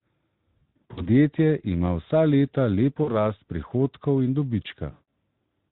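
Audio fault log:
0.62–1.07 s: VoIP packet loss concealed by the speech codec. About 220 ms of audio is missing, scattered across 440 ms with gaps up to 60 ms. The decoder extrapolates pitch and filter, giving buzzy or noisy, fading stretches.
3.03–3.23 s: VoIP packet loss concealed by the speech codec. Roughly 40 ms is lost. The extrapolated frames smear briefly, and the sound stays weakened until the predictor recovers.
4.91–5.02 s: VoIP packet loss concealed by the speech codec. About 160 ms is lost. The concealment stretches the last frame into a decaying tone or coloured noise over the light Speex coding.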